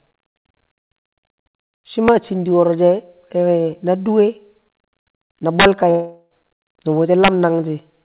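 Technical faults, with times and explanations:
2.08 s, 5.60–5.65 s and 7.24–7.28 s, integer overflow: peaks about 2, 6 and 3 dB over full scale wrap to the opposite sign, heard as sharp cracks and seen as vertical full-height jumps in the waveform.
5.90–6.43 s, long network dropout: a fading buzz fills about 0.4 s, then brief near-silence, likely from lost packets. It shows as a smeared band, then a blank gap below the 4 kHz ceiling.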